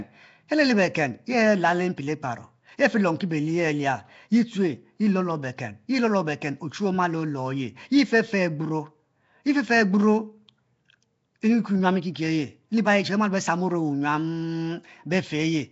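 Throughout, the speech has a rough, hissy halo and smeared, underwater tone, likely from Nellymoser compression. Starved bands appear as noise-filled patches on a spectrogram, with nothing above 7.7 kHz.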